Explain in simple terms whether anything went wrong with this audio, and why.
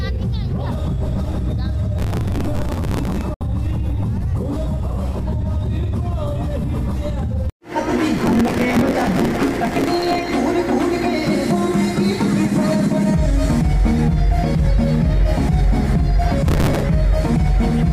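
Three times the computer was too busy to keep up. In processor overload crackle, it missed deadlines for tiny chunks of sound, replaying stale bits and causing gritty crackling from 1.97 to 3.21 s, 8.17 to 10.33 s and 16.48 to 16.83 s.

At 3.34 s, a digital broadcast dropout occurred: the receiver lost the signal and muted itself, so the sound fades quickly to silence for about 64 ms, and that moment is lost.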